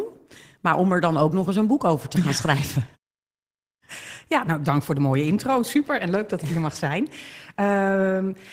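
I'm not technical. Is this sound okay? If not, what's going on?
Yes, this sound is okay, and nothing is going wrong with it.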